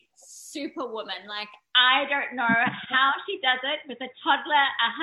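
The recording input was likely switched to a poorer device at 1.75 s, with no gap at the switch. From there to the end the audio turns dull and boxy, with nothing above 3.8 kHz, a level shift of around 5 dB, and a new, faint background noise floor well below the signal.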